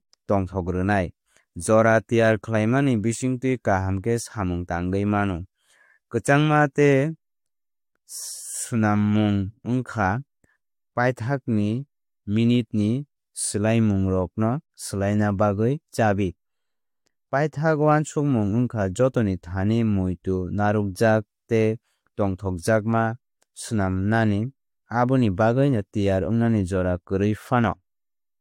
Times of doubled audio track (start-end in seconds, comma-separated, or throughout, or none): none